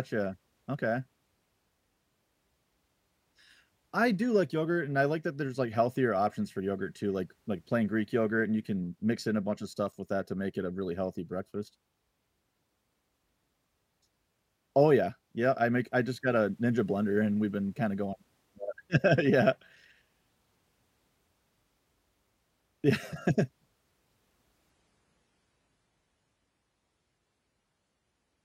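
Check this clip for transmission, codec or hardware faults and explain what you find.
One transmission fault is present: an adaptive stream at a lower bitrate, from 24.7 s to the end. The stream switched to a lower-quality version when the connection slowed. Treble vanishes above 11.5 kHz and codec artefacts thicken, consistent with a drop from about 96 to 32 kbit/s AAC. Unlike a dropout or rebuffer, the change is abrupt but seamless, with no gap.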